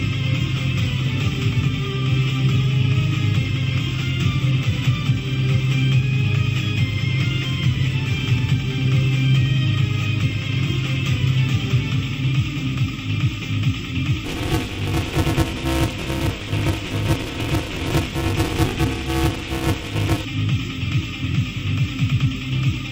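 The program filling the playback ring buffer and the hardware reading it have slipped out of step and cross inside every period. This causes buffer tearing from 14.25 s to 20.25 s. Roughly half of each buffer replays audio about 20 ms old, with hard joins on both sides, which sounds like a robotic 200 Hz rattle riding on the sound.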